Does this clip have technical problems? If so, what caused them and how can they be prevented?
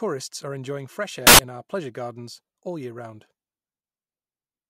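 Yes. Samples built from the wrong bytes appear from 1.27 to 1.39 s, between "are enjoying fresh" and "in our pleasure gardens": misassembled bytes turn the rapidly changing low bits into the dominant part of each value, producing a burst of loud, harsh broadband noise. Prevent it by validating byte order, alignment and sample width whenever audio is read or converted.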